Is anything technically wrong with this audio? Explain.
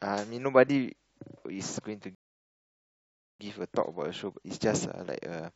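Yes, there's a rebuffering stall in this speech clip. At 2.15 s the audio cuts to dead silence and stays there until 3.40 s, so about 1.25 s gets inserted. What's happening is the player drained its downloaded buffer and had to sit and wait for more data before carrying on. When playback comes back, it picks up exactly where it left off, so nothing's skipped; you just get that awkward hole in the middle of the speech.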